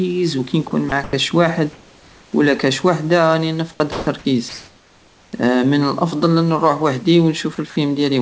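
Brief holes open in the speech at 0.68–0.71, 0.89–0.92 and 1.04–1.13 s, where the speech gives way to a thin, steady hiss for 30 to 90 ms before resuming. This is sound dropped by the voice detector: the sender likely judged these low-level speech fragments to be background, stopped transmitting, and the receiver patched the gaps with synthetic noise until the detector triggered again.

From 1.73 to 2.33 s, just before "ولا كش وحدى راني", the room background turns flat and featureless, about 2 dB quieter than the real background around it. That is comfort noise in place of the background. Transmission likely paused in this silence, so the receiver generated a smooth noise roughly matched to the room's level, and the genuine ambience returns only when speech resumes.

Right after "كش وحدى راني نفقد", from 3.92 to 4.07 s, a 150 ms stretch is again replaced by steady hiss, with about 80 ms of actual sound lost. 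This is likely another sound dropped by the voice detector.

A second stretch of comfort noise runs from 4.49 to 5.33 s, ending before "من الافضل". Here the synthetic fill sits about 3 dB louder than the room background it replaces, likely because transmission paused and the receiver filled the gap with smooth, detail-free noise.

Two final clips at 7.55–7.58 and 7.70–7.76 s swap short pieces of speech for noise, costing 20 and 50 ms respectively. These are likely further drops by the voice detector, which gated out quieter sound near the end. Throughout, the audio carries the 8 kHz top end of the G.722 call path.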